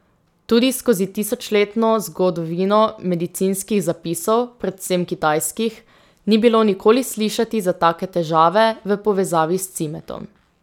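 Listening through the speech recording, nothing technical stood out at any point.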